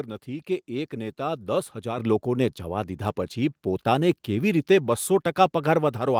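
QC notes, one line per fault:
1.98 s, microphone volume stepped up: partway through the speech, just before "લોકોને જવા", the whole signal jumps louder by about 7 dB in a single step. The voice and the background noise rise together, because the device's input gain was raised at the source rather than the talker moving closer. On the waveform the envelope widens abruptly at that point and stays wider. On the spectrogram every band, including the noise floor between phrases, brightens at once.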